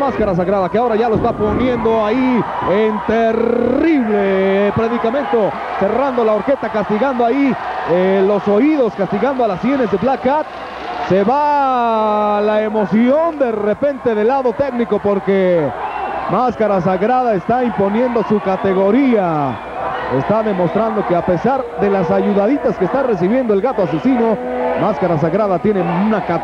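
No technical faults can be heard anywhere in this recording.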